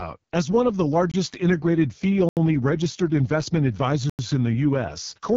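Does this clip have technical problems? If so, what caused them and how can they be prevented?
Yes. The whole clip went through the AMR wideband (HD Voice) codec at its lowest rate of 6.6 kbit/s, so it sounds rough and raspy, with nothing above 7 kHz. Encoding at 12.65 kbit/s or higher would keep it clear.

There are also three blocks of digital silence: 1.12 to 1.14 s after "one of the" (23 ms, which fits a 1024-sample buffer), 2.29 to 2.37 s after "integrated fee" (79 ms), and 4.10 to 4.19 s after "registered investment" (93 ms, which fits a 4096-sample buffer). These likely come from the output buffer not being filled in time. Larger buffers or lighter real-time processing load would prevent it.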